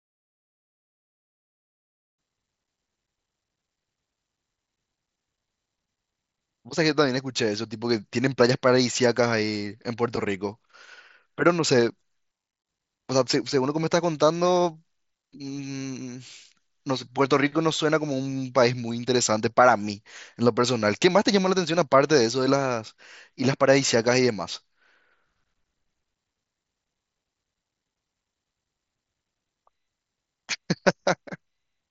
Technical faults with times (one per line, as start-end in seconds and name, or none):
0.00-2.18 truncation distortion on a fade